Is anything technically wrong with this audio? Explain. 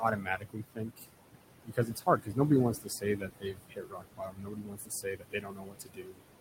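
Yes. Noise suppressor artifacts run through the whole clip. The suppressor pulls the background down by about 21 dB wherever it judges a band to be steady noise, frame by frame, so the noise dips away between phrases and swells back under them.

Speech cut by the noise suppressor happens three times, from 0.17 to 1.08 s, 1.65 to 2.38 s and 2.74 to 6.32 s. The suppressor mistakes parts of the speech for noise and drops them by up to about 19, 18 and 22 dB. That adds up to roughly 0.7 seconds, half a second, and about three seconds of affected speech. Soft consonants and word endings sound swallowed or faint. The room noise sits about 9 dB below the speech.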